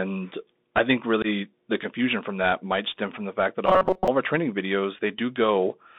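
The whole clip runs through a Bluetooth CVSD headset codec: speech is squeezed to roughly 200 Hz to 3.7 kHz, with scratchy s sounds and grainy hiss, consistent with a 64 kbps CVSD link.

At 1.22 to 1.26 s, right after "I think", there's unconcealed Bluetooth headset packet loss. About 19 ms of audio, a few packets' worth, just vanishes, leaving an abrupt hole before "the confusion from that".

From 3.66 to 4.08 s, after "from the fact that", the voice turns into a rigid metallic buzz at 188 Hz. That's robotic sound from repeated short buffers, likely a roughly 5 ms chunk looping over most of that stretch, before "of our training videos".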